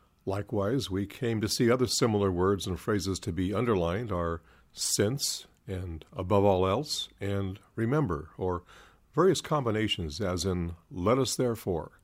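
No technical faults can be heard anywhere in the clip. Nothing in the audio breaks, drops out or changes character at any point along its timeline.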